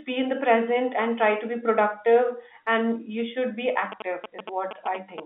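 From 3.92 s to 5.2 s, a galloping dit-dit-dit of short 217 Hz buzzes cuts in, about 10 dB below the speech level. These are GSM signalling bursts: a nearby 2G phone's brief radio bursts, rectified by the audio circuitry into audible pulses.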